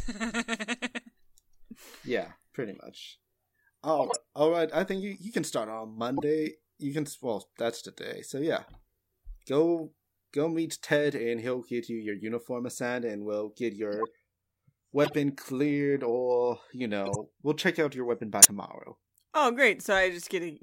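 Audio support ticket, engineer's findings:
Corrupt frame decoded at 3.99–4.16 s, 6.17–6.23 s, 13.93–14.07 s, 15.04–15.15 s and 17.05–17.26 s: short chirpy noise bursts peaking around -15 to -25 dBFS. Decoder played damaged frames; flipped bits misplace energy across a few to several frame lengths.

Compressed frames skipped at 18.38–18.45 s: the speech jumps ahead by around 30 ms. Missing or rejected frames were dropped by the decoder.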